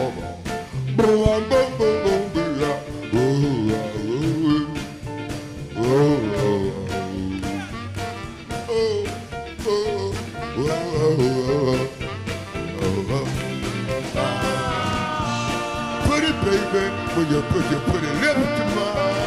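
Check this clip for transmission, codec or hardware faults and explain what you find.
Two loud pops are present, so there is a hardware-type fault. The first runs from 1.26 to 1.28 s and peaks about 15 dB above the sound. The second, at 12.79 to 12.81 s, is softer, about 5 dB above. Each is a single sharp click or thump lasting roughly 24 ms, with the audio continuing underneath. A sudden voltage step, likely from a switch, connector, static discharge or driver glitch, was added to the signal. The circuitry after it shaped that step into a brief pulse.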